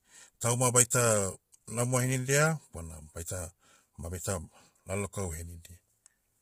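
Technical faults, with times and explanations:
Throughout, low-delay AAC compression: the speech sounds rough and grainy, with noise filling the gaps between harmonics and nothing above 15.6 kHz. That points to a heavily squeezed stream, likely AAC-ELD at something around 24 kbps, whose short frames smear pitch detail.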